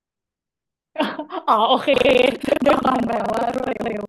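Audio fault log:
1.92 s to the end: buffer tearing. The write and read positions of the playback ring buffer have slipped and now cross inside every period, so most of each buffer replays speech from roughly 150 ms earlier, spliced in with hard joins on both sides. The result is a steady robotic rattle at 23.4 Hz, which fits a 2048-sample buffer. On the waveform, evenly spaced discontinuities appear wherever speech is present. The spectrogram shows vertical click lines at that spacing, with smeared, repeated harmonic segments between them.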